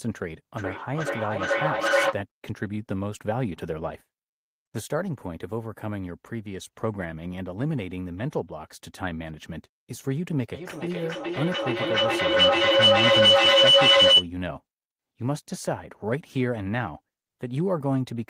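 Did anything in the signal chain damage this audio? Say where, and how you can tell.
Yes. Feedback howl appears twice in the call path. A tone near 500 Hz runs from 0.58 to 2.23 s, about 5 dB above speech. A shriller one near 3 kHz runs from 10.54 to 14.32 s, about 11 dB above. Both pulse roughly every 0.4 s. Two devices in one room form a microphone-to-loudspeaker loop, and it gains on each trip around.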